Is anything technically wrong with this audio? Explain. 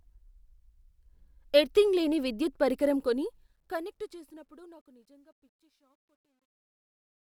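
Yes. From 2.88 s to the end at 7.21 s, the speech shows truncation distortion on a fade. As the level falls through the fade-out that begins around 3 s, a gain stage keeps too few bits and adds no dither, which fits a 12-bit path. The low-level waveform collapses into coarse square steps. The sound turns gritty, worst from 4.96 s to 7.21 s. Unlike gate chatter, the grit deepens steadily as the fade deepens.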